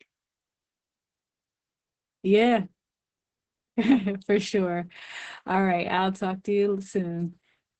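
Opus voice compression affects the speech for the whole clip. The coder is running in its speech-oriented SILK mode at wideband. Nothing is present above 8.8 kHz, so sibilants and breath lose their edge. The damage is heavy. Voiced sounds turn hoarse and slightly robotic because the excitation is coded coarsely. Consonants blur. That points to a very low bitrate, around 10 kbps.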